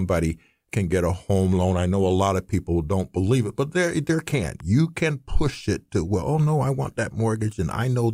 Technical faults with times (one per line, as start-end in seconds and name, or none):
4.60 electrical switching spike